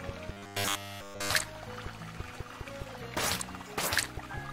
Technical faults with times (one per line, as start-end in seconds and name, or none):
0.32-1.30 robotic sound from repeated short buffers